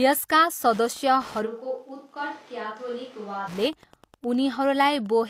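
From 0.65 s to 5.14 s, Wi-Fi interference runs under the speech. A nearby radio's beacon, every 102.4 ms, is being rectified by the audio circuit. It gives a steady tick about ten times a second, faint, around 25 dB below the speech.

At 1.47 s the speech turns suddenly roomy and hollow, with thinner bass. The level drops by around 10 dB, and faint room noise rises. This is likely a switch to a distant microphone. The close sound snaps back at 3.46 s.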